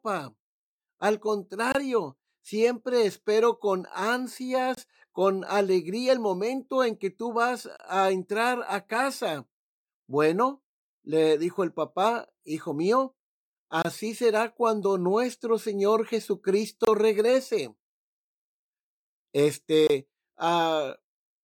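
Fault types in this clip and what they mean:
Gap between chunks: the speech arrives in pieces about 3 s long, and a 25 ms silent hole with abrupt edges opens at each join, such as just before "con alegría el momento". Unlike a dropout, no sound is lost; it pauses, then resumes intact.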